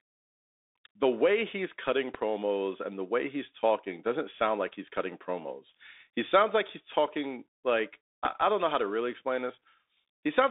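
From the start, the whole speech clip runs through a Bluetooth CVSD headset codec. The band sits between about 250 Hz and 3.7 kHz. Nothing passes above 3.8 kHz. The sound fits a 64 kbps CVSD link. That codec sends one bit per sample, stepping the level up or down. The step size adapts, but loud high sounds outrun it. The damage is plainly audible: a granular hiss sits under the speech, and s sounds turn scratchy.

At 2.15 to 2.17 s, just after "the way he's cutting", a loud pop lands. It is a single sharp click, roughly 15 dB above the speech. The speech carries on underneath. At 8.26 to 8.28 s, between "like he's talking like" and "I don't know how", another single pop strikes at the same level. Each is a brief voltage pulse added to the signal. A likely cause is a connector or driver glitch.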